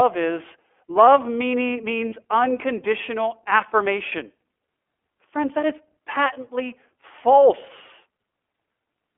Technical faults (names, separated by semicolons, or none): iLBC codec; lost iLBC frames